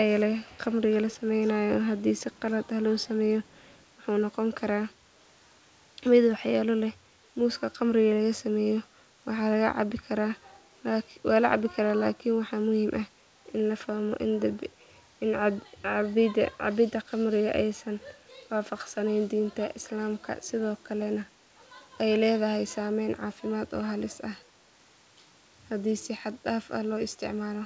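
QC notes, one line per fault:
0.15–0.23, 0.42–0.60, 0.91–1.22, 2.19–2.41 and 3.45–3.85 s, echo leak: a faint copy of the speech trails the original by a fixed 327 ms, roughly 30 dB down, strongest near 20 dB down at 0.91 s and weakest near 35 dB down in the last two. The likely cause is a far-end echo canceller letting some loudspeaker pickup return. The constant delay and its restriction to scraps in the opening seconds distinguish it from room reverberation or a doubled feed. Like the direct speech, the echo is band-limited to about 8 kHz.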